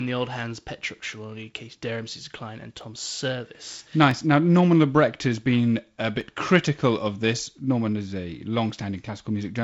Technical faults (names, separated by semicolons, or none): dropped samples